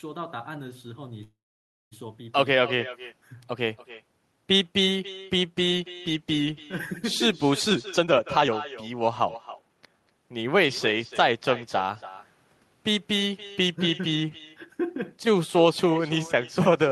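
An echo with no canceller runs through the whole speech clip. Every phrase is followed, around a third of a second later, by a second copy about 16 dB quieter. That copy sounds thinner. The far end is playing the call over a loudspeaker. Its microphone catches it and sends it back. Nothing removes it, so the talker hears themselves after the network round trip.

At 1.23 s a call audio freeze begins and lasts until 1.93 s. The last sound is stretched briefly, then the audio drops to silence for about 560 ms. In all, 680 ms of filler is inserted. When sound returns, it resumes exactly where it stopped. Nothing is lost, but the call now runs 680 ms later. The likely cause is packets held up in transit, leaving the jitter buffer empty.

From 7.67 s to 8.53 s a jitter buffer speed-up sets in. The speech plays at 165% speed with its pitch unchanged, so it sounds rushed. Roughly half a second of audio is cut away. 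A milder pass follows from 8.93 s to 10.11 s at 109%, removing around a tenth of a second. In both, the buffer had built up too much delay. The receiver trimmed many short pitch-period slices to catch up.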